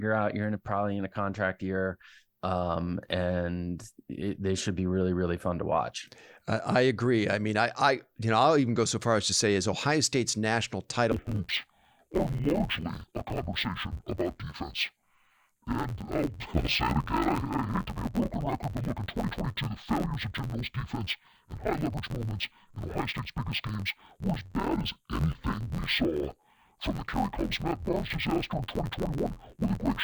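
Interleaved audio read as planar runs from 11.1 s to the end: each 11.6 ms block, which fits a 512-sample buffer, has its alternating left-right samples split into halves, so the speech turns dull and robotic, buzzing at 86.1 Hz without an obvious octave drop.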